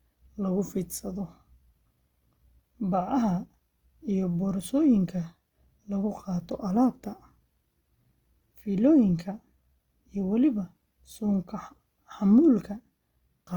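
From start to finish the speech has a rough, grainy texture: voiced sounds carry a plainly audible buzzing grit. The top end still reaches about 20.1 kHz, so the damage is texture rather than dullness. This is likely Opus compression in its CELT music mode, at a rate that fits about 24 kbps. Short of bits, it rebuilds upper bands from noise or folded lower content, so detail becomes grain.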